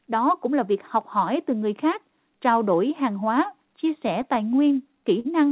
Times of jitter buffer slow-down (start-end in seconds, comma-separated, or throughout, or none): none